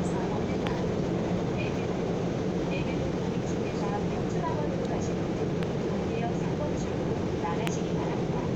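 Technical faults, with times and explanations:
0.67–0.69 s, 5.63–5.65 s and 7.67–7.69 s, loud pop: three single, sharp pops, each about 20 ms long and some 15 dB above the surrounding sound, which continues beneath them. Each is likely a brief voltage pulse from a switch, plug, static or driver glitch entering the signal path.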